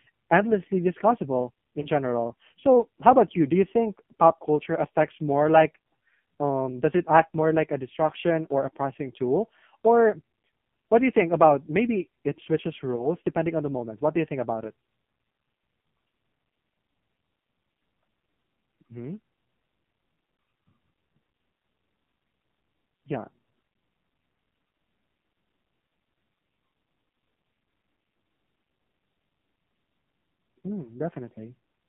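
From start to end the speech carries heavy AMR narrowband mobile codec damage. The vocal-tract model, starved of bits, makes the sound buzzy and synthetic, which fits the 5.9 kbps mode. A spectrogram shows energy confined between 150 Hz and 3.4 kHz, with smeared, blocky harmonics.

At 1.80 to 1.90 s, right after "endlessly discussable", lost AMR speech frames cause a brief dip and warble. This fits a single 20 ms frame concealed by repeating the previous pitch and filter settings at falling gain. The waveform shows a short amplitude sag, and the spectrogram a smeared, repeated slice.

At 12.96 to 13.07 s, between "about maybe it switches" and "depending on the moment", the same concealment produces another momentary dip and rough restart, again pointing to one lost frame. The spectrogram shows a short smeared patch of copied harmonics where the level briefly drops.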